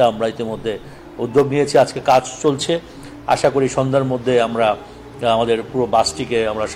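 At 1.36 s the quality drops abruptly and stays low to the end: an adaptive stream at a lower bitrate. Artefacts rise, with no gap, which fits a switch from AAC-LC near 96 kbit/s to HE-AAC near 40 kbit/s.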